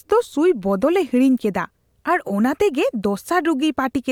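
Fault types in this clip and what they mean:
Nothing here to flag: the recording holds steady all the way, with no dropouts, glitches or odd noises anywhere in the audio.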